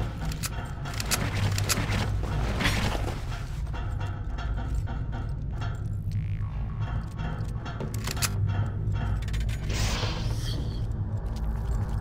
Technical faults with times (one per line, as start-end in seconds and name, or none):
8.30-8.35 Bluetooth stutter